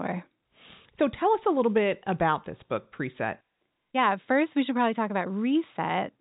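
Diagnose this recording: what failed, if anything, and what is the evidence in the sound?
Nothing here has failed: the speech comes through as ordinary G.711 telephone audio, topping out at 4 kHz as that format always does, and I can't point to a problem at any stage of the chain.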